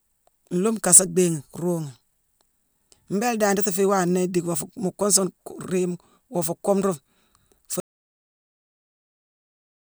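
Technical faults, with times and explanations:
7.8 s to the end, audio dropout to silence: the speech stops abruptly mid-flow and is replaced by silence, with no room tone, hiss or tail, and it never returns for the last two seconds or so of the clip. That flat, empty quality means silence was being written rather than a quiet room being captured. The input was likely lost through a disconnected device, broken link or accidental mute while recording continued, so anything said after that point is gone.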